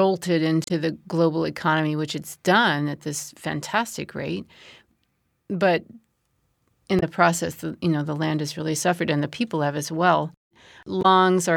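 Damaged data in a compressed stream causes brief decoder glitches at 0.64–0.71 s (before "the global economy which"), 6.99–7.03 s (before "process you know the") and 11.01–11.06 s, where corrupted frames break sync.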